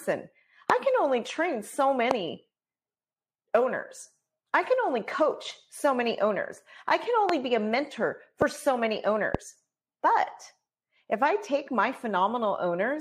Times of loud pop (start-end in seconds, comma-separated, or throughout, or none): 0.70-0.72, 2.11-2.13, 7.29-7.31, 8.42-8.44, 9.35-9.37